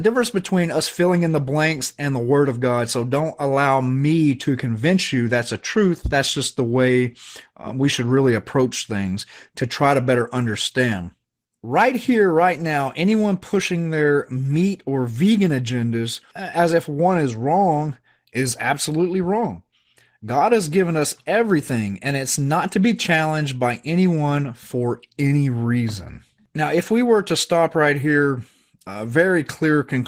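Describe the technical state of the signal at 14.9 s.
At 14.9 s, as throughout, Opus voice compression at a rate suggesting about 16 kbps coarsely codes the speech's excitation, leaving it plainly hoarse and slightly robotic.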